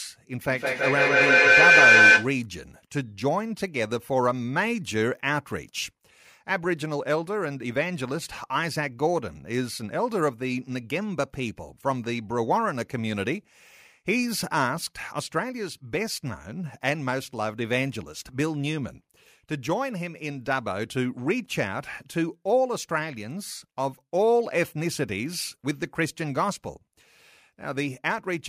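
Speech opens with a feedback howl from 0.39 to 2.37 s: a tone near 1.5 kHz swells to about 10 dB above the voice, pulsing roughly every 150 ms. Unlike echo, which fades, the repeats grow as a microphone-to-loudspeaker loop keeps adding gain.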